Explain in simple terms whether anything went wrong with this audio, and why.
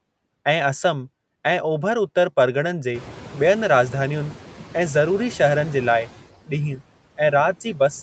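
Yes, two things went wrong. Throughout the speech, the background noise drops away in pauses and swells back under talking. These are noise suppressor artifacts: the suppressor turns down whatever it judges to be steady noise, moment by moment. That includes the room noise, which gets louder from around 3 seconds.

Between 2.21 and 2.33 seconds, one sound is held slightly too long. This is a short stall from a late packet: a piece of audio arrived late, so the receiver stretched the last sound until it caught up.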